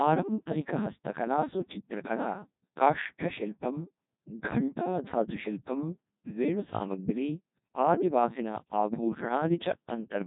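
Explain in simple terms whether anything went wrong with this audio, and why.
The speech passed through a Codec 2 vocoder for the whole clip, which sends only a rough outline of pitch and tone and rebuilds the voice from pure tones. So it sounds robotic and buzzy, heavily damaged, with nothing above about 3.8 kHz.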